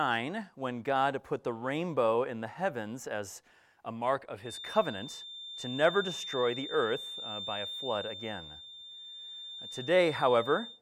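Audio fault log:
4.40–10.81 s, feedback whistle: a thin, steady tone near 3.6 kHz enters at 4.40 s and holds to the end, sitting some 10 dB beneath the main sound and swelling and fading slowly in level rather than climbing. This is likely a loudspeaker-to-microphone loop balanced just at the edge of feedback, so a single high frequency keeps recirculating and sustains itself without ever tipping into a full runaway howl.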